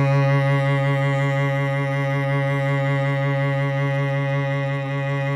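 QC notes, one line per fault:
No faults found in the music. Nothing in the clip needs flagging.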